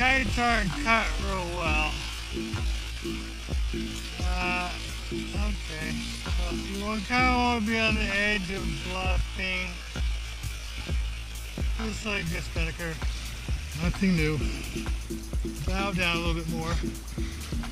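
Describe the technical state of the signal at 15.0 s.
At 15.0 s the signal is intact, with no audible fault at that moment.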